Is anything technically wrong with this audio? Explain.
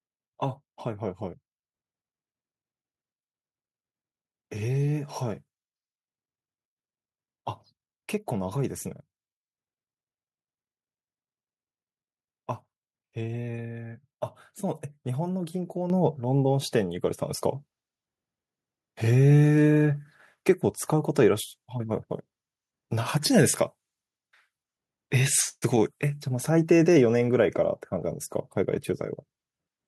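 Yes. At 15.9 s the microphone volume stepped up: the calling software judged the input too quiet and raised the device's input gain in a single jump of about 7 dB rather than easing it up gradually. Because the change happens at the microphone itself, the speech and the background noise both become louder at the same instant, and the clip stays at that higher level from there on.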